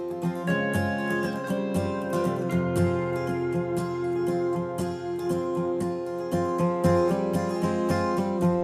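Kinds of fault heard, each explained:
Nothing in this music stands out as a technical fault; there's no glitch, dropout or distortion to point to here.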